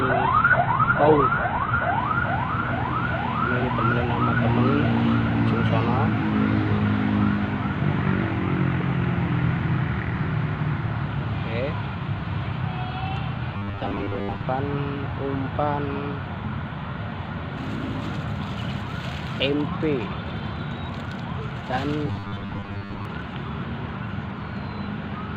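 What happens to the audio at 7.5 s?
Nothing goes wrong at 7.5 s; the audio runs through that moment intact, with no dropout, click or distortion.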